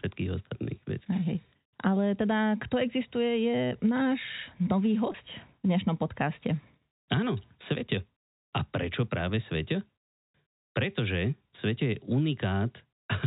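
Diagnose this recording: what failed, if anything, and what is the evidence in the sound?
Network stage: packet loss with pitch repetition at 5.12 to 5.14 s. A brief held, buzzy stretch fits one lost 20 ms packet, bridged by repeating the last pitch period.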